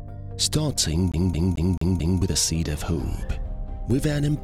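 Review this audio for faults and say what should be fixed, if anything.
From 1.12 to 2.22 s the audio is caught in a CD stuck on one turn. The same 0.22 s slice plays five times in a row, with a brief mute at each jump. A scratch is sending the laser back one track at the same point on every rotation. The spacing is strict and even and the loop never moves forward, which is how it differs from a buffer underrun stutter, whose gaps are ragged and whose audio keeps advancing. To prevent it, clean or replace the disc, or re-rip it with error-correcting extraction.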